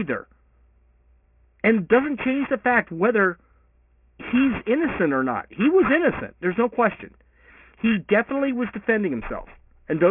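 Aliasing runs throughout this speech clip: sound above 3 kHz folds back as fairly prominent gritty, wrong pitches, which fits resampling to 6 kHz without anti-alias filtering.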